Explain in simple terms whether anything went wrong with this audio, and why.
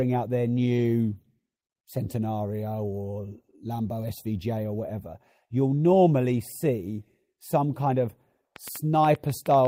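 A train of clicks runs from 8.56 s to the end of the speech, about eight per second at an uneven pace. The clicks are similar popping ticks that stand out above the speaking level. They likely come from electrical interference or a faulty connection or power supply.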